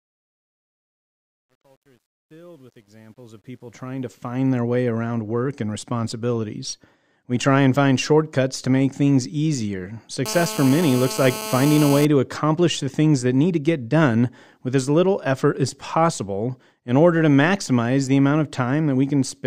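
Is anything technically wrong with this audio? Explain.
Yes, there are two faults. From 0.0 to 4.58 s the speech fades in with truncation distortion on the fade. The gain stage keeps too few bits and adds no dither, which fits a 10-bit path. At low level the waveform collapses into a few coarse square steps. It is worst up to about 3.3 s, where the sound is gritty. Unlike added hiss, this grit follows the signal and vanishes in pauses.

From 10.26 to 12.05 s there is GSM phone buzz. A nearby 2G phone transmitting in bursts at 217 Hz is being rectified by the audio circuit. The result is a hard, raspy buzz full of harmonics, about 10 dB below the speech. It holds steady throughout, as during a call. Its higher, edgier pitch separates it from 50 or 60 Hz mains hum.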